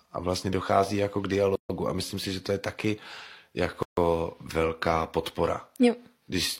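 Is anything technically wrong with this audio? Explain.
Yes. Gaps at joins of encoded pieces open at 1.56–1.70 s and 3.83–3.97 s, gaps of about 142 and 146 ms, from untrimmed encoder delay and padding. Unlike a dropout, the speech resumes exactly where it stopped.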